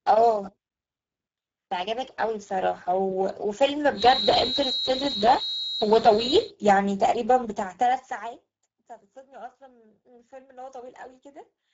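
Throughout the clip the speech carries Speex codec damage that is plainly audible: a hoarse, grainy texture from too few bits for the excitation, which points to a low-quality setting around 10 kbps. Nothing is present above 7.6 kHz.

From 3.91 to 6.54 s a thin, steady whistle at 3.9 kHz sits behind the speech, a few dB below it and swelling and fading slowly in level. This is a feedback whistle, likely a loudspeaker-to-microphone loop held just at the edge of feedback.

From 7.42 to 8.68 s the level falls by roughly 25 dB in unsmoothed steps of 2 dB each, at around fifteen steps per second. Each step clicks, so the fade is heard as zipper noise, a fast ticking that rides on the speech until the level settles.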